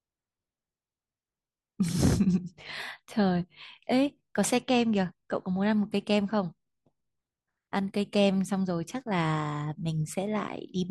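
No technical faults are audible.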